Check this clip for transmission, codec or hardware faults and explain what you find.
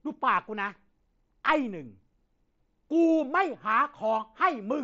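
No transmission, codec or hardware faults turn up in this speech clip. The audio shows the wideband mSBC Bluetooth headset path at work, with its light coding grain on louder moments and content reaching up to about 8 kHz.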